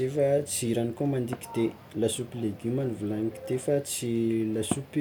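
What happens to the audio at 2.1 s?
Nothing goes wrong at 2.1 s; the speech carries on intact through that moment, with no dropout, click or distortion.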